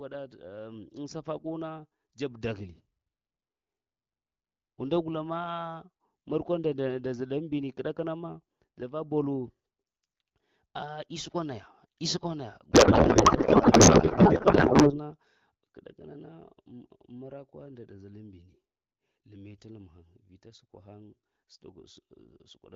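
At 12.72 s the speech gives way to garbled noise and warble. This is a codec payload misread, and it lasts until 15.00 s, about 2.3 s. The decoder is reading the wrong bit layout. Frames packed octet-aligned are being parsed as bandwidth-efficient, so every field lands in the wrong place. The output barely tracks the talker. Either side of the burst, the AMR wideband (HD Voice) codec sounds clear, which fits a rate of about 12.65 kbit/s.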